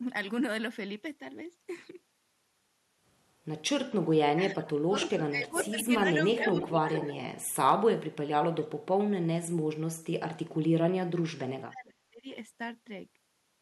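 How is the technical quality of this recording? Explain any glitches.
The recording has two recurring problems: the talker's voice repeatedly dips or drops out, and delayed repeats of the voice appear around the same moments.

Speech suppressed in double talk: the voice sinks sharply or breaks up at 4.35–5.93 s (by as much as about 30 dB), 6.52–7.1 s (about 10 dB), 8.53–8.64 s (about 20 dB) and 10.66–12.26 s (about 35 dB). This is likely an echo canceller turning down both sides while both parties spoke at once.

Echo leak: a delayed copy of the voice, trailing by about 440 ms, surfaces at 5.02–5.1, 5.55–5.71, 6.34–6.77 and 6.97–7.17 s. It sits about 15 dB below the speech at first and about 10 dB below later. This is likely loudspeaker sound that the loudspeaker side's echo canceller failed to remove before sending it back.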